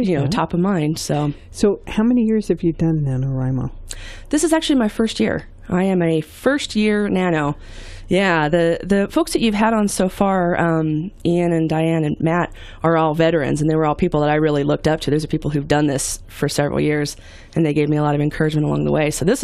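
Nothing technically wrong turns up anywhere in the recording.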